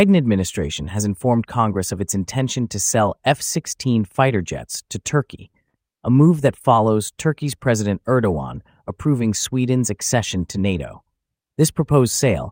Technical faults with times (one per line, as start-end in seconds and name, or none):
5.50-5.76 short stall from a late packet